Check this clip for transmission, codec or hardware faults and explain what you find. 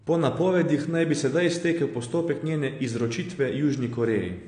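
One codec fault runs through the whole speech clip: AAC compression. Nothing above 9.7 kHz survives, and the damage is plainly audible as a dull, smeared tone with fizzy, warbling sibilants. This points to AAC-LC at a low bitrate, around 32 kbps, likely discarding and coarsely quantising high bands. A spectrogram shows a hard ceiling at 9.7 kHz.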